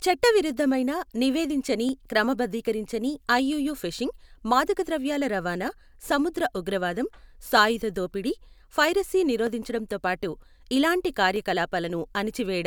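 From 1.89 s to about 11.36 s there's a click in the speech roughly every 1.89 s, about seven in all. That regular spacing is likely clock drift buffer slips: two clocks a couple of hundred ppm apart, with a small block of samples dropped or repeated at each slip.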